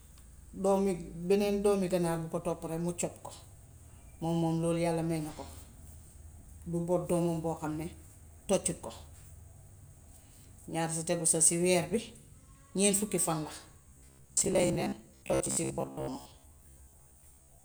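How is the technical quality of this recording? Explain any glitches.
The recording has one clear glitch, confined to its final stretch. Robotic sound from repeated short buffers runs from 13.82 s to the end at 17.64 s. The speech turns into a stiff, metallic buzz pitched at about 66.8 Hz that still loosely tracks the words. A 66.8 Hz buzz means a fragment of roughly 15 ms being replayed over and over, which fits a 15 ms buffer. Audio is likely arriving too slowly, so around half of what is heard is repeated material while the real signal is skipped.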